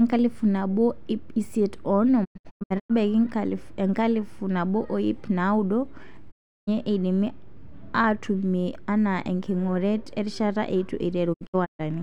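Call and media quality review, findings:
Digital broadcast dropout, three events. The receiver is losing frames or failing checksums, then muting with a 20 ms fade until valid frames resume. The hole lengths fit roughly 32 ms frames. At 2.24–2.92 s, about 0.42 s of sound drops out in short holes across 0.64 s, the longest 96 ms. At 6.30–6.69 s, about 0.35 s is lost. At 11.32–11.81 s, about 0.26 s drops out across 0.45 s, the longest hole 128 ms. The dropped audio is gone.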